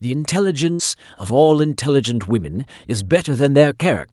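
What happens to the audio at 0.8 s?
A burst of packet loss from 0.73 to 0.82 s lets the receiver stretch and fade the last sound for about 60 ms, then resume with roughly 60 ms missing.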